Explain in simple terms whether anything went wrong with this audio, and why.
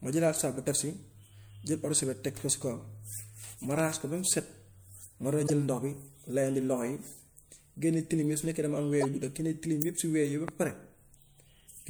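Short chirps and bursts of noise cut into the speech three times: at 0.38 to 0.40 s, right after "ma jëlaat"; at 5.46 to 5.50 s, just before "jël ndox bi layandi"; and at 9.01 to 9.05 s. Each is a corrupt frame decoded. A packet of compressed audio arrived damaged, and the player played it anyway, putting sound in the wrong places for a split second. The lengths suggest one or two damaged frames each time.

Sharp pops land on top of the speech, which carries on underneath. There are two in quick succession at 3.79 to 3.95 s, just before "ko ba", and a single, clearly louder one at 10.48 to 10.50 s. These are loud pops, likely from a sudden electrical jolt such as a plug, a switch or static.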